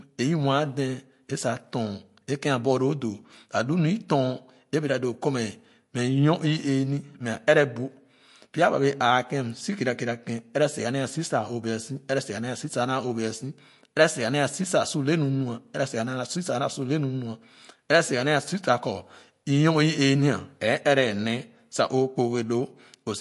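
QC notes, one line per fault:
Throughout, MP3 compression: likely an MP3 encoder short of bits, consistent with 48 kbps, removing everything above 11.3 kHz and leaving the speech dull and watery.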